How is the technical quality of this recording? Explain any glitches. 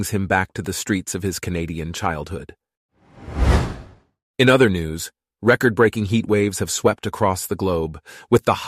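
No glitches can be heard anywhere in this recording. Nothing in the speech audio points to a technical fault at any moment.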